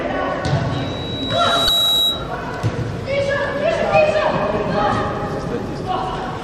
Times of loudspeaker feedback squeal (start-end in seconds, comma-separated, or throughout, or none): 0.73-2.36